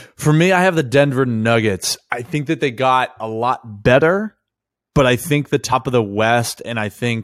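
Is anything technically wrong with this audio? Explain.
Yes. At 5.71 s, just after "but I think the" and before "of the", compressed frames were skipped: the decoder never played several whole frames, either because they were missing from the file or because it rejected them as damaged. With frames of 23.2 ms, about five were dropped, so the speech leaps ahead by roughly a tenth of a second.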